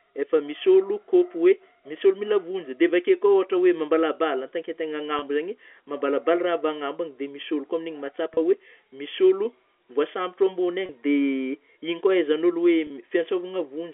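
Four brief dropouts of packet loss with pitch repetition, at 5.19–5.22, 8.34–8.37, 10.86–10.89 and 12.87–12.90 s. Each 30 ms gap, likely one packet, gets patched by repeating the last pitch cycle, so the speech briefly holds a slightly buzzy tone over the narrow G.711 telephone band.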